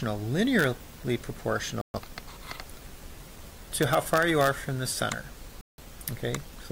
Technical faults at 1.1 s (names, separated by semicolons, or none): none